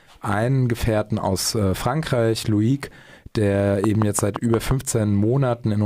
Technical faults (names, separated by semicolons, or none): train of clicks